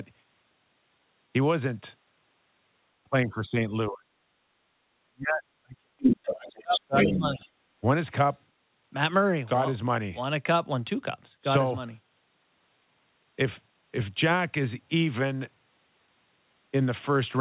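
From 3.06 to 4.23 s the speech sinks by around 35 dB, then again at 5.00 to 5.43 s (around 40 dB) and 5.61 to 5.90 s (around 35 dB), with a milder dip of around 20 dB from 6.31 to 7.44 s. This is likely speech suppressed in double talk, where an echo canceller unable to separate near talker from loudspeaker echo ducks everything. Unlike packet loss, these are level dips of several hundred milliseconds.

Around that last dip, scraps of the other side's voice leak through at 5.99 to 6.35 s (a little louder than the speech), 6.57 to 6.81 s and 6.98 to 7.18 s (about as loud). The likely cause is residual echo the canceller failed to remove. These bursts differ from room reverberation because they are a separate voice rather than a smeared tail of the talker, all within a band that stops at 4 kHz on the call path.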